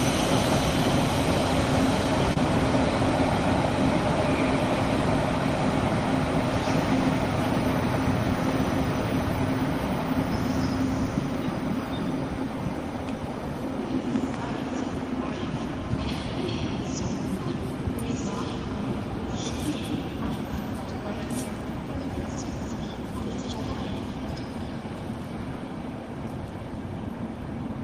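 At 2.33 to 2.38 s, a short concealed packet loss occurs. About 20 ms of audio failed to reach the decoder in time, so the receiver invented roughly 23 ms of replacement signal, extending the preceding sound from its own periodicity or as shaped noise, and then crossfaded back into the real stream. The result is a brief smear or wobble, and any very short sound falling inside that gap may disappear.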